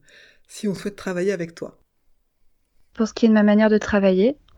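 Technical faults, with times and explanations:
0.76–0.78 s, 1.78–1.80 s, 2.80–2.83 s and 3.83–3.85 s, overlapping chunks: the speech was handled in blocks about 1.0 s long, and each new block began 20 ms before the previous one finished, so the same 20 ms of audio plays twice at every join. That brief doubling breaks the flow of the speech and comes across as a click or stutter, recurring once a second at each block boundary.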